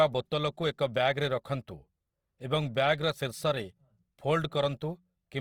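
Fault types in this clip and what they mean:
Opus compression: The speech sounds grainy and rough throughout, not swirly. This likely comes from Opus music mode near 24 kbps. Bandwidth stays full, to 20.3 kHz.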